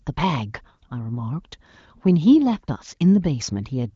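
No faults are audible in this speech; the band stops near 7.1 kHz, consistent with an HD Voice (AMR-WB) link at one of its higher rates.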